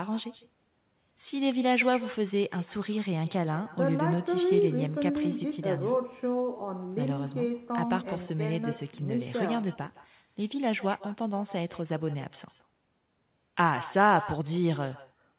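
From start to finish, every phrase is trailed by a second, fainter copy: an echo with no canceller. The far end's loudspeaker is feeding its microphone and nothing subtracts it, so the talker hears themselves again after a delay of roughly 150 ms, about 18 dB down and thinner. Unlike room reverberation, which smears into a tail, this is a distinct repeat set apart by a gap.

Also running through the whole clip is clock drift between sender and receiver. The sender's clock runs roughly one and a half percent slow, so the receiver's jitter buffer keeps draining and the receiver has to stretch the audio to keep playing. Packet loss produces isolated dropouts at random points. Drift instead produces a steady pressure that keeps forcing small fixes in one direction, and it persists for as long as the call does.

Those fixes are heard as repeated timing corrections from 0.67 s to 15.36 s. Short pieces are repeated again and again, at uneven intervals, which adds roughly a third of a second in total and brings playback to about 98% speed. 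Each repeat is tiny, so the effect is a faint hiccup or a slightly wobbly pace. A uniform slowdown would sound smooth, but these corrections arrive unevenly and give the tempo an unsteady quality. All of this sits within the narrow telephone band of the G.711 call path, with nothing above 4 kHz.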